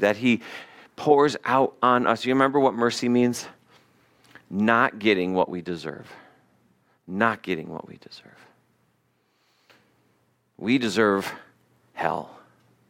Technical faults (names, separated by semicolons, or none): none